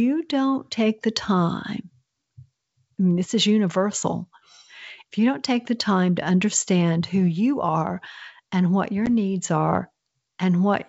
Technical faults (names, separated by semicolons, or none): packet loss on an ADPCM call